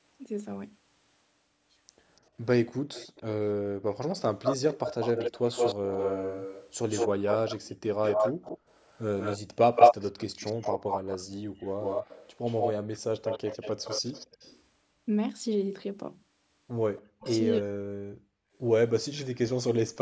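From 2.16 to 3.23 s there is an echo leak, most likely from a far-end echo canceller that failed to remove all of what its microphone picked up from its loudspeaker. The residue comes back as a faint copy of the speech, well below the direct voice, trailing it by 286 ms.

At 3.6 to 3.86 s the background is gated by the echo canceller. While the loudspeaker was active, the canceller pulled the microphone down by about 40 dB, so the room sound drops out for roughly a third of a second and then returns.

From 4.15 to 14.61 s the echo leak returns, now much stronger. A copy of the speech runs 169 ms behind at nearly the level of the original, likely because the canceller was removing very little. A shorter leak at 16.97 to 17.34 s trails by 274 ms and sits clearly quieter.

Overlapping that, from 17.02 to 18.07 s, comes speech suppressed in double talk. With both sides talking, the canceller likely could not separate the local talker from the loudspeaker echo and turned everything down. 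The voice dips deeply over roughly 0.7 s.

At 18.35 to 18.54 s the background is gated again, dropping about 40 dB for around 0.2 s. A final faint echo leak at 19.15 to 19.38 s trails by 274 ms, about 25 dB below the speech.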